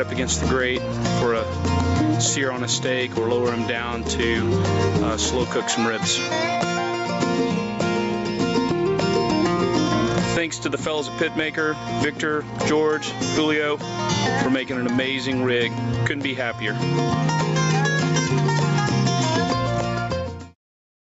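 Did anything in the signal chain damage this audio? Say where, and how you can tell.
Yes, there's gain pumping all the way through: the gain swings by around 20 dB, leaving everything squashed. The likely cause is input gain set far too high, with a fast limiter clamping down at capture.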